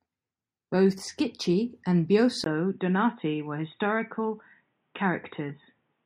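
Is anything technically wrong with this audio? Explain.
Yes. At 2.44 s, after a 20 ms gap, the speech turns dull and boxy, with nothing above 3.8 kHz and a faint new hiss. The likely cause is the input switched to a poorer, narrower-band device.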